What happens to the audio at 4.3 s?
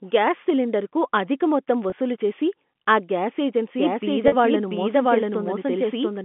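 Around 4.28 to 4.32 s there is packet loss with pitch repetition: about 40 ms of audio, which fits two lost packets, is bridged by repeating the last pitch period. It sounds like a brief buzzy hold rather than a click or a gap of silence. That moment also falls inside a doubled audio track, which begins abruptly after "చేసి ఆ గ్యాస్" at 3.78 s and runs to the end. A second full-band copy at about the same level trails by about 0.7 s, likely from a second capture path or a misaligned edit. Unlike an echo, it has no decay or room colour.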